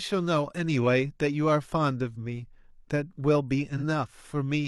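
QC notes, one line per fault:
3.76–3.83 s, AAC frame loss with concealment: a brief smeared, noisy or phasey patch interrupts the speech for about 43 ms, which fits a single lost AAC frame. The decoder covered the gap by reusing the last good spectrum with scrambled signs or interpolated energy, so the sound continues but loses its crisp structure. On a spectrogram the harmonics blur into a uniform smudge across that slice. The waveform keeps its level but turns noise-like there.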